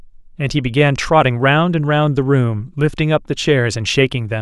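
Nothing in the recording stood out as a technical problem on listening.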